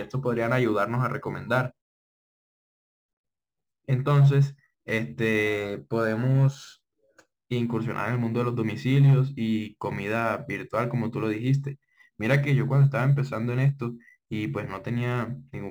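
A crude rate conversion runs through the whole of this speech recording. The sound was resampled by simply dropping whole samples rather than filtering, and the error pattern fits a 48 kHz to 44.1 kHz change. There, about one sample in twelve is discarded, in a sequence that repeats 300 times a second. That uneven stepping adds inharmonic tones unrelated to the voice, roughly 35 dB below it. They are heard as a faint gritty fizz that rides on louder and brighter syllables.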